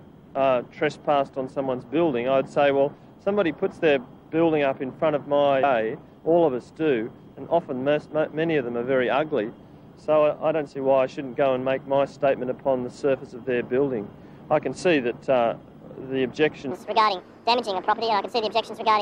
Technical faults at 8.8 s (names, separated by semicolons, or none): none